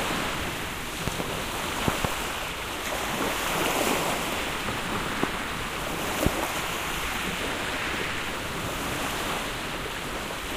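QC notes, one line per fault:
1.08–1.23 s, 1.88–2.07 s, 5.23–5.26 s, 6.26–6.29 s, loud pop: a voltage step, likely from a plug, switch or static discharge, enters the chain. It is heard as sharp pops about 20 dB above the sound, doubled in the first two, single in the last two.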